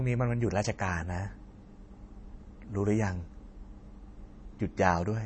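From start to end, the speech carries plainly audible MP3 compression damage, likely from encoding at a low bitrate, which fits roughly 32 kbps. Nothing is left above 8.3 kHz. The encoder ran short of bits, so it cut the treble at a fixed point. It also dropped weak frequency lines that flicker on and off between frames. That gives the sound a watery, swirly texture. Attacks are smeared.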